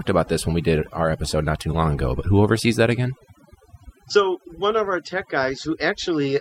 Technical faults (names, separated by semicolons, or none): overdone noise removal